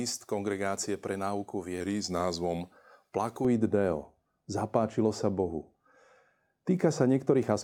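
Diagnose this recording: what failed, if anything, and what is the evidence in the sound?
Right after "pre náuku", from 1.80 to 2.61 s, the speech slows by about 6.4% and drops 115 cents, then snaps back. Speed and pitch moving together as one abrupt step, not a wavering wow, point to the driver or buffer stage, likely a drift correction step resampling to refill its buffer.

From 3.45 s to the end the speech turns dull and muffled, with a smooth downward slope reaching about 11 dB at 10 kHz relative to 1 kHz. This is de-emphasis applied wrongly, a treble cut applied to audio with no matching pre-emphasis, or applied twice. The gradual tilt, unlike a low-pass filter's sharp cutoff, sets it apart.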